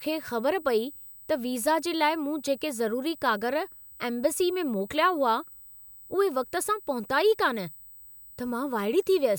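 A steady 8 kHz whine, loudest at 16 kHz and roughly 20 dB below the speech, runs throughout: USB whine, microframe current leaking into ground.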